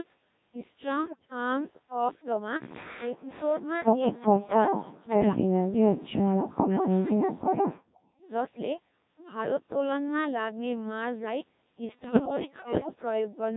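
Throughout, the speech carries the Codec 2 vocoder sound: robotic, buzzy and heavily smoothed, which fits the 1.3 kbit/s mode. Only pitch, voicing, energy and a coarse spectral envelope survive. The decoder rebuilds the voice from sine waves, so the original waveform and fine detail are gone.

From 1.05 to 1.30 s, and again from 12.04 to 13.02 s, bit errors on digital voice radio corrupt the vocoder frames at a rate of around one bit in ten. Each damaged parameter throws off a whole frame, so the voice lurches in pitch, level and tone colour, breaking into bleeps, warbles and robotic gibberish.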